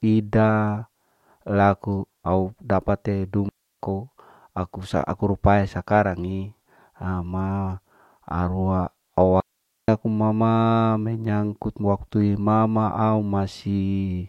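Digital wireless dropouts cut the speech twice. The first runs from 3.49 to 3.80 s, about 0.31 s long. The second runs from 9.40 to 9.88 s, about 0.48 s. Each time the receiver lost too much data and muted fast. Each leaves a clean hole of near silence, with no noise burst either side.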